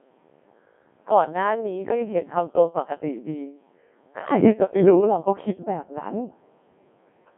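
Speech, coded throughout by the Codec 2 vocoder. Heavy damage makes it robotic and buzzy, resynthesised from sine waves, band-limited to 150 Hz–3.5 kHz, and consistent with roughly 1.6 kbit/s.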